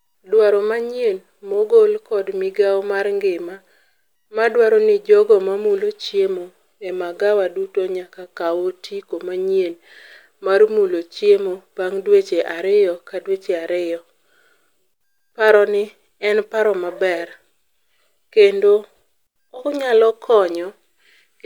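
At 1.54 s there is a repeated buffer. New audio arrived late, so a 5.3 ms piece played twice, which fits a 256-sample buffer. It sounds like a brief click.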